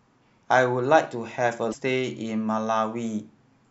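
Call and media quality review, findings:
Damaged data in compressed stream, 1.69–1.74 s, about 60 ms. Brief glitch in the speech. Decoder likely hit corrupt bytes, misdecoded frames and lost sync until the next valid header. Spectrogram: short disruption; waveform: abrupt discontinuity.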